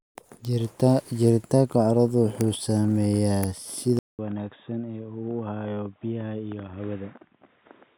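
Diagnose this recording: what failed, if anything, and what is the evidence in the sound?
At the driver stage, the input was likely switched to a poorer device at 3.99 s. A 200 ms gap precedes speech that runs to the end with nothing above 3.8 kHz, about 5 dB quieter, over a new low noise floor: a narrower-band capture path took over.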